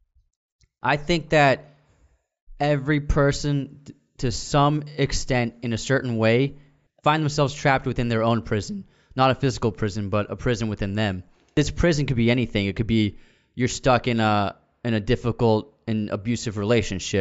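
Nothing stood out on listening to this speech recording.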